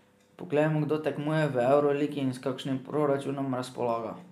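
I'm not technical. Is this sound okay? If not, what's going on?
Yes, no faults heard.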